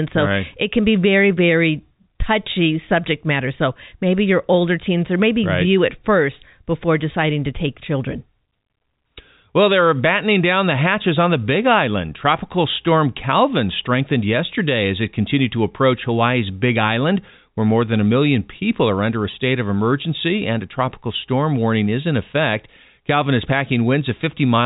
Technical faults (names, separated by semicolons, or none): packet loss with pitch repetition